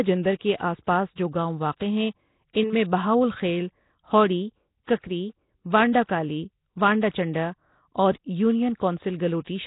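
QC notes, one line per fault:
Throughout: Nellymoser compression, likely; speech has a rough hissy halo and underwater smear, nothing above 3.8 kHz, fitting heavy low-bitrate Asao coding.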